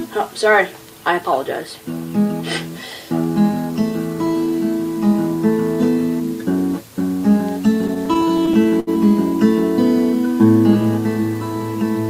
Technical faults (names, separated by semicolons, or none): repeated stalls (stutter)